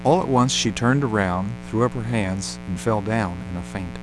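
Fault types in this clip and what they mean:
Mains buzz: There's a raspy, steady buzz sitting under the speech for the whole clip, and it's built on 60 Hz mains. Something like a dimmer, a rectifier or an unshielded run is letting sharp switching spikes into the signal twice per mains cycle, so you get a dense stack of harmonics climbing well up into the kilohertz range. It sits only around 15 dB below the speech.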